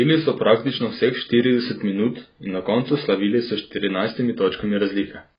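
From start to finish the speech sounds dull and muffled, with nothing above about 5 kHz, so sibilants come across soft and fizzy, and sustained vowels carry a watery warble. That points to heavy AAC compression, likely AAC-LC squeezed to a very low rate, which fits something around 16 kbps. At that budget the encoder drops the top end and leaves gaps in the spectrum, which gives the smeared, swirly texture.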